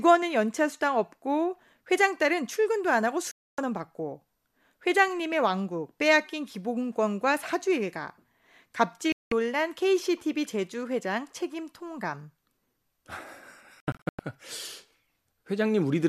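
The receiver lost valid frames and muted in a digital broadcast dropout. The speech cuts to silence at 3.31 s for 0.26 s and at 9.12 s for 0.19 s, then breaks into short holes, none longer than 96 ms, between 13.80 and 14.19 s.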